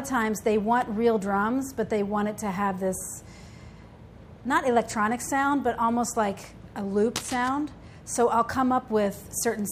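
Cable scratch noise appears from 7.16 to 7.50 s, a burst of dense, uneven crackle lasting about a third of a second. It sits roughly 10 dB below the main sound, heard as a scratching, rustling layer on top of it. The likely cause is a worn cable, connector or control being moved: its contact resistance jumps about rapidly, and each jump injects a small irregular spike into the signal until the movement stops.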